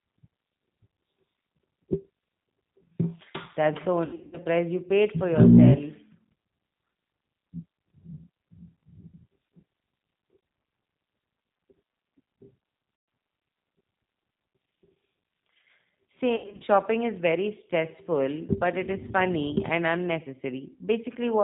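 Throughout, the speech carries plainly audible G.729 codec damage, consistent with an 8 kbit/s encoding. The coder rebuilds the voice from a filter, a pitch predictor and sparse pulses, cutting everything above 4 kHz and leaving a rough, slightly synthetic texture.

VoIP packet loss concealed by the speech codec occurs at 4.05 to 4.38 s, just before "you paid for"; at 12.96 to 13.08 s; and at 16.36 to 16.64 s, before "is very stressful but". In each, the decoder stretches the last sound into a fading buzzy tone or coloured noise.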